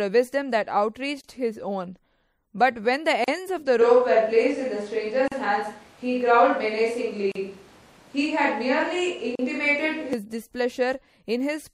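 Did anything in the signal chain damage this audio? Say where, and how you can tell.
Yes. MP3 compression is plainly audible across the whole clip: the speech sounds watery and swirly, and consonant attacks are smeared. This damage happens at the codec stage. It is likely that the encoder ran at a low bitrate, around 64 kbps, and ran short of bits. It then dropped weak frequency lines, which flicker in and out from frame to frame.

A gap at a join of encoded pieces appears every 2.0 s: at 1.21 s (about 29 ms long) and at 3.24, 5.28, 7.32 and 9.35 s (about 38 ms each). Each is a short silence with smeared edges, after which the sound resumes where it stopped. This is a storage or assembly fault. The audio was encoded in separate two-second pieces and joined untrimmed, so each encoder's start-up delay and padded final frame remain as dead air.

A switch to a distant microphone runs from 3.81 s to 10.13 s. 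The speech abruptly turns roomy and hollow and loses bass, while the overall level barely changes. Background noise becomes audible, at roughly 30 dB below the speech. The change back at 10.13 s is just as sudden. This is a capture-stage fault, most likely the close microphone's feed dropping out and a camera or room microphone standing in for it.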